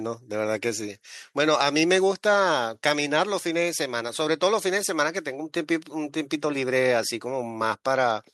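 No technical faults can be heard anywhere in the speech recording; the signal stays continuous and stable for its whole duration.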